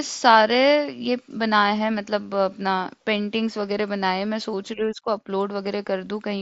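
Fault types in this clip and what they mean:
No faults found in this speech; the audio is carried over the Bluetooth mSBC headset codec at about 61 kbps, whose wideband path passes the speech up to 8 kHz.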